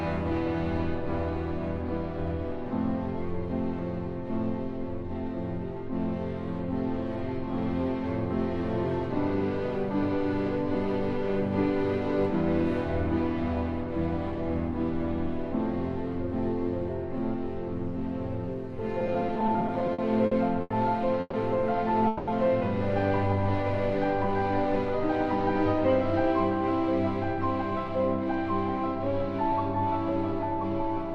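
From 18.99 to 20.72 s the audio shows repeated stalls (stutter): it halts 17 times in quick succession, each halt patched by extending the last sound, with the longest about 90 ms and roughly 330 ms filled in total, close to a fifth of that stretch. Nothing is dropped, but the flow drags and catches. The cause is packets arriving later or slower than playback, so the jitter buffer keeps running dry. Two longer call audio freezes follow. At 21.20 to 21.35 s the sound holds and smears for about 130 ms, ending in a brief 10 ms of silence. At 22.07 to 22.29 s it holds for about 200 ms without any silent moment. Each time the audio then resumes where it stopped, so a gap is inserted rather than content lost, and playback sits correspondingly later afterward. Both freezes are likely due to packets being held up in transit until the buffer emptied.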